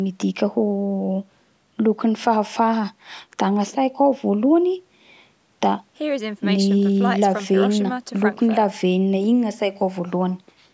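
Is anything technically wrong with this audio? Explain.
No, nothing is technically wrong with this speech.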